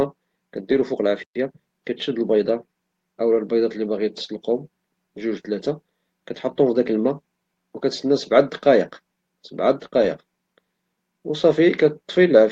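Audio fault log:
0.71–0.81 s and 10.01 s: lost packet rebuilt from error correction. The audio turns briefly rougher and noisier without any gap, because low-bitrate copies carried in the following packets stand in for the missing ones. The first patch spans about 60 ms, fitting three lost packets, and the second about 20 ms, fitting one. The lack of any silence separates this from a dropout.
1.23–1.35 s: playback stall. The sound halts mid-flow and stays silent for 120 ms before resuming. The likely cause is a player that ran out of buffered data or had its thread blocked. Unlike a rebuilt packet, nothing fills the hole: there is true silence.
1.35–1.83 s: time-compressed catch-up. Right after the stall, the audio runs hurried at about 1.25 times normal speed while keeping its pitch. Small pieces are cut out and cross-faded to drain the backlog. The unchanged pitch separates it from a simple speed-up.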